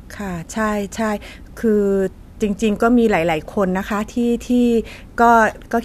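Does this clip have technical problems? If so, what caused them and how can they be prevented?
No, the recording has no audible technical faults, so there is nothing here to trace to a cause or to prevent.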